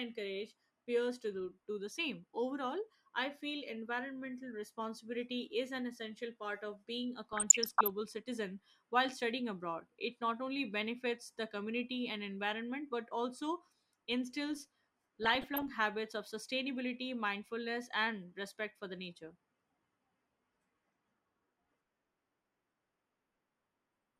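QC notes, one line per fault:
7.33–7.90 s and 15.23–15.62 s, DAB burbling: short noise blips and sudden level jumps over the sound right after "part of being a" and again after "environment but also instills". Weak reception lets bit errors, somewhere under 1 percent, slip past error correction, so individual MP2 sub-bands lurch in level for up to a frame.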